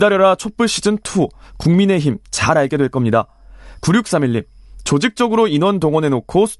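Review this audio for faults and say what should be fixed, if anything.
No faults turn up in this audio, so nothing needs to be fixed.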